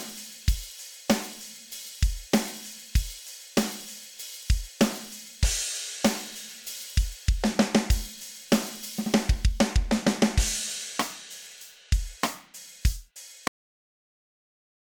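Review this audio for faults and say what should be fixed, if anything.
The final buffers were never written out, a cut-off end. Playback stops abruptly at 13.48 s, in the middle of a sound, and drops straight to digital silence for the remaining 1.4 s or so. There is no decay or natural tail, just a hard edge where audio data simply ends and nothing follows. The fix is to restore or re-capture the missing tail. To prevent this, make sure the recorder flushes and finalises all pending buffers before the file is closed.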